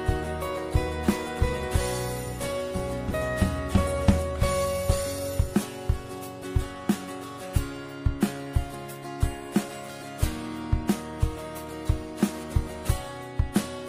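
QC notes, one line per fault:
No faults to note.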